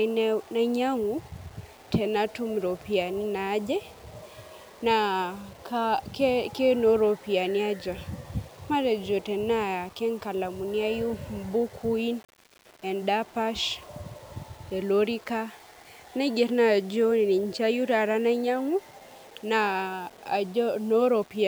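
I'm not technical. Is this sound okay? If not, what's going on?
No. The speech sounds grainy and gritty from start to finish. Quiet moments turn rough, and the softest parts crackle or vanish. This is likely low bit depth without dither. There are too few volume steps, which fits 7-bit audio. Each value was simply rounded.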